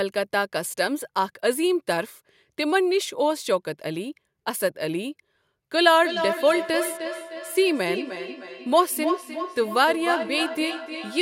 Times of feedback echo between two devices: 5.76-11.22

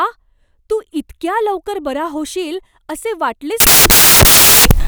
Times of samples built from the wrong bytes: 3.60-4.88

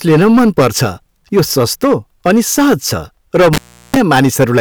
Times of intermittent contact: 3.53-3.96

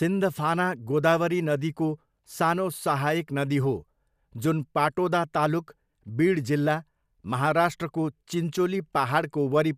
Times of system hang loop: none

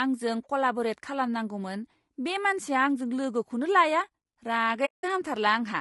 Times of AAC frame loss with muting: 4.85-5.04

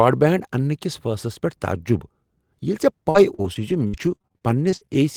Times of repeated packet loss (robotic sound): 3.10-4.94

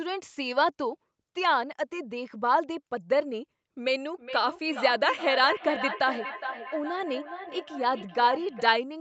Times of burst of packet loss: none

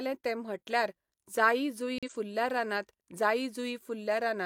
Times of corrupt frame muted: 1.98-2.10

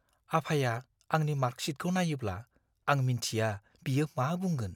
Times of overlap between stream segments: none

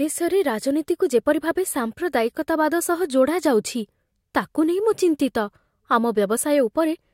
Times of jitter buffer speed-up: none

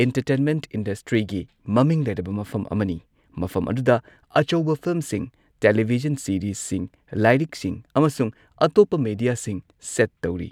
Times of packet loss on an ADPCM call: none

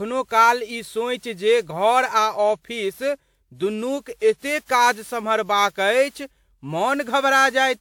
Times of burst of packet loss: none

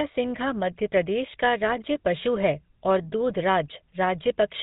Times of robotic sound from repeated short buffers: none

